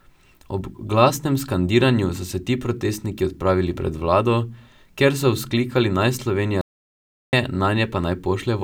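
At 6.61 s the speech stops dead and stays silent until 7.33 s, an audio dropout to silence lasting about 0.72 s, likely from input briefly lost while zeros were written. The waveform shows a flat line; the spectrogram shows a blank vertical band with no room tone.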